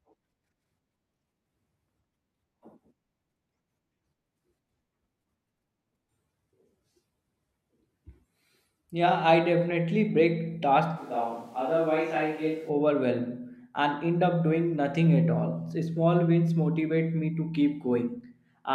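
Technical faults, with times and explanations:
10.98–12.68 s, switch to a distant microphone: right after "I definitely break" the speech suddenly goes roomy and hollow, thins out in the low end, and drops by about 5 dB, with more room noise coming up underneath, though it still sits well below the speech. At 12.68 s it snaps straight back to the close sound. That abrupt jump in both directions likely means the close mic's feed dropped out and a farther-off mic, maybe the camera's, covered the gap.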